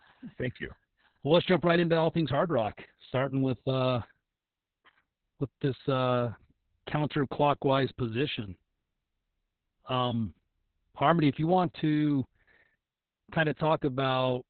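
Opus voice compression runs throughout this speech: the SILK coder's narrowband limit near 4 kHz and coarse excitation leave it muffled, hoarse and robotic, pointing to roughly 6 kbps.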